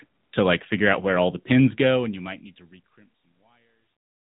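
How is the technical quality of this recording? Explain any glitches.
The recording has one fault throughout, plainly audible codec damage from the AMR narrowband mobile codec. The fade-out from about 1.5 s to the end is smooth, with no step or click.

AMR narrowband mobile codec, whole clip: the speech was resampled to 8 kHz and rebuilt from a vocal tract model with a pitch predictor, at a rate consistent with roughly 10 kbps, giving a synthetic, band-limited sound. A spectrogram shows a flat ceiling at 4 kHz with nothing above it.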